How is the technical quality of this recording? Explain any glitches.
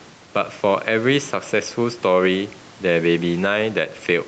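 The recording is held back by one fault, gain pumping, and it is band-limited to 8 kHz by the call path.

The gain pumping runs throughout the speech. The gain swings by around 5 dB. The likely cause is input gain set far too high, with a fast limiter pulling it down. Levels sound squashed.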